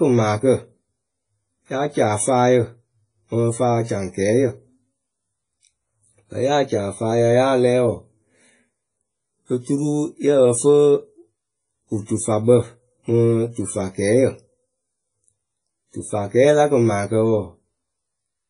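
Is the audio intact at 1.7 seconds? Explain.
No. At 1.7 seconds the speech carries heavy codec damage that runs through the whole clip. It sounds like WMA compression, likely at a low bitrate near 24 kbps. Nothing is present above 10.1 kHz. The transform coder quantises long blocks coarsely, so the error smears over tens of milliseconds around each sound. Weak spectral lines are dropped entirely. The result is ringing and washy, with hiss that swells and fades with the signal.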